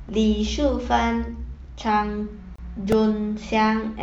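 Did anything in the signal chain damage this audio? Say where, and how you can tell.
Yes. At the playback stage, a gap between stream segments opens from 2.56 to 2.59 s: about 28 ms of dead silence with hard edges on both sides, at what sounds like a join between stream segments. Two segments' timestamps don't quite meet, and the player pads the difference with silence. Unlike a dropout, nothing is missing. The speech resumes exactly where it stopped, just pushed later.

At 2.92 s the driver or buffer stage produces a repeated buffer, heard as a tiny click-buzz rather than a stutter. The repeating fragment is only about 1.5 ms long, which fits a 64-sample buffer. New audio arrived late, so the device replayed that last buffer several times in a row, joined hard each time. What separates it from the segment gap is that there is no silence: the same sliver of sound fills the hole, and no audio is lost.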